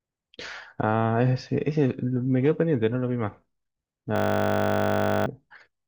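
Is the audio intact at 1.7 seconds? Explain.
Yes, at 1.7 s the speech plays through cleanly, with no dropout, click, distortion or other fault audible at that moment.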